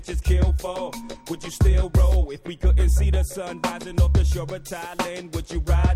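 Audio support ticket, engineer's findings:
Three sharp single clicks at 0.76 s, 3.30 s and 4.50 s, likely dropped samples: a fraction of a millisecond missing, waveform steps abruptly, thin vertical line on spectrogram.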